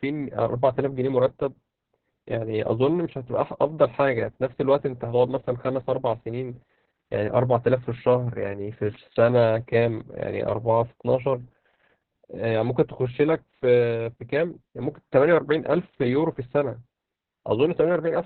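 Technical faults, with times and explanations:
Throughout, Opus voice compression: the speech is muffled and hoarse with a slightly robotic edge, pointing to Opus at a very low rate around 6 kbps using its SILK linear-prediction coder in narrowband mode. Nothing is left above about 4.4 kHz, and the excitation is coded so roughly that the damage is heavy. On a spectrogram, energy stops abruptly at that ceiling across the whole clip, and harmonics look smeared and grainy below it.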